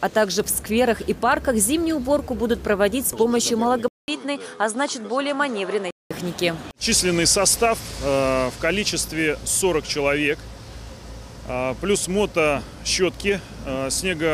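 From 3.88 s to 6.11 s the sound turns duller and about 5 dB quieter. A 200 ms gap opens at the switch, nothing above 11.1 kHz gets through, and a faint new background noise appears, likely from an input switched to a poorer device.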